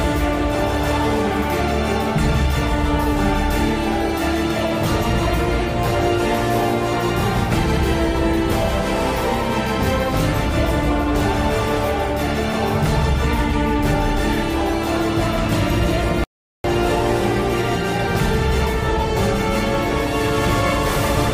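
At 16.24 s the sound cuts off abruptly in mid-flow and the output stays completely silent for about 0.40 s before the audio returns at 16.64 s. This is a playback stall: a gap of dead air inserted into continuous material rather than a dropout of a few samples. The likely cause is the player running short of buffered data, or its playback thread being blocked, so nothing reached the output until it recovered.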